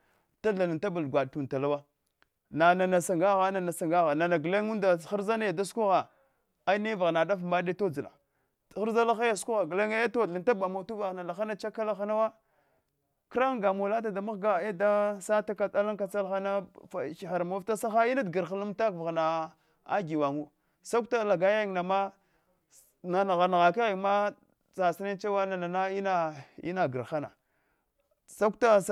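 No technical faults can be heard anywhere in this speech recording. Nothing interrupts or alters the sound at any point.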